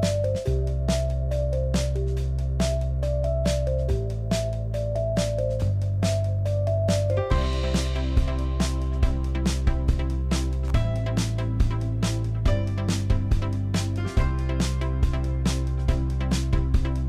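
At 10.68 to 10.70 s there is an electrical switching spike. A sharp snap sits on top of the sound, peaking around -25 dBFS. It is likely an arc from a nearby switch, motor or static discharge, picked up by the audio line.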